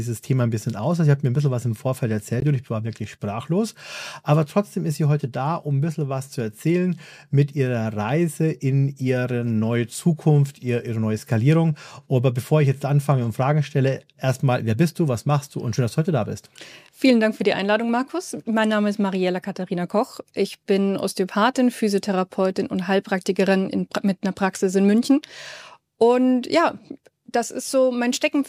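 At 2.40 s the sound drops to silence for 18 ms and resumes, a Bluetooth stall, likely the headphones' buffer running dry while packets were resent.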